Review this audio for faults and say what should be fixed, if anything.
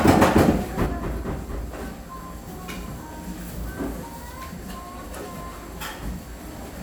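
From 0.86 s to the end, the sound drops abruptly by about 6 dB. Anything present only on the lost side disappears. The likely cause is that one channel drops out. The mono sum then keeps only half of the shared signal. To prevent this, check connections and channel routing, and watch both channel meters throughout recording.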